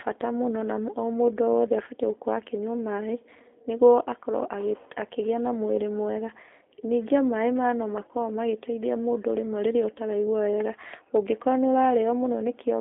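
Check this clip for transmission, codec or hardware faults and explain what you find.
The speech carries one fault from start to finish: G.729 codec damage, plainly audible throughout. The sound is narrow and telephone-like, confined to roughly 300 Hz to 3.6 kHz with nothing above 3.7 kHz, and it has a rough, slightly synthetic grain. The codec resynthesises each 10 ms frame from a vocal tract filter, a pitch predictor and a few pulses rather than sending the waveform, at a rate that fits 8 kbit/s, so fine detail and sibilance are lost.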